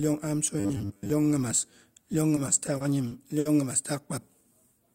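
From 0.60 to 1.10 s, just before "nyimas iyon", the speech turns into a rigid metallic buzz at 100 Hz. This is robotic sound from repeated short buffers. Most of that stretch is likely replaced by a 10 ms slice looped again and again.

From 2.35 to 3.47 s, between "nyimas iyon" and "nyimas taak", the speech stutters. Delivery stalled seven times, and the last sound was stretched across each wait, the longest about 60 ms. That totals 160 ms of filler. Nothing is lost, but the speech drags.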